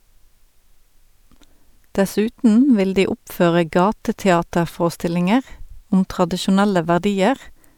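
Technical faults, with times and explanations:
No technical faults can be heard in this speech recording. There is nothing to time or explain here.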